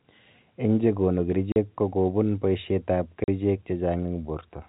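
At 1.52 s and again at 3.24 s the speech drops out for 40 ms each time: packet loss filled with silence. The receiver had nothing to play, so it inserted dead air, which fits two 20 ms packets going missing. The cut has a hard edge at each end, all over the narrow telephone band of the G.711 line.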